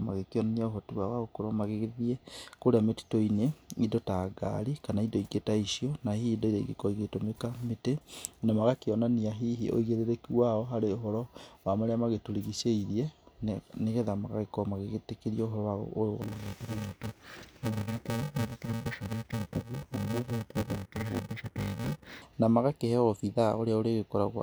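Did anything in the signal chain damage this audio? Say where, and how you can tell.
Yes. From 16.22 to 22.22 s the speech turns dull and robotic with a buzz near 345 Hz. This is interleaved audio read as planar at the buffer or sample-format stage, with blocks of about 2.9 ms, which fits 128 samples. Pace holds and there's no octave drop, unlike a resampling error.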